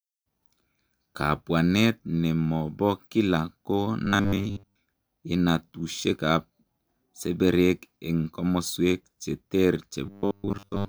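From 4.06 to 4.76 s, and from 10.06 s to the end, speech turns into a rigid 100 Hz buzz. This robotic sound likely comes from repeated 10 ms buffers.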